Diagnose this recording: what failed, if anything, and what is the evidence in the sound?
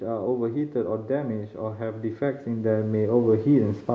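Call processing failed here, with automatic gain rising. From 1.07 s to 3.85 s the speech and the background swell together by about 11 dB. The control judged the input too quiet. It then raised its gain slowly, lifting everything at once.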